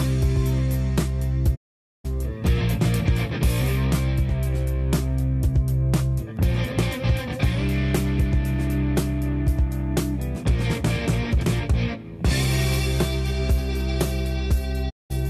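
The sound fades to silence at 1.54 s and stays muted until 2.06 s, then drops out again from 14.89 to 15.12 s. Both are digital broadcast dropouts: the receiver stopped getting valid frames and muted, losing about 480 ms and 192 ms of programme.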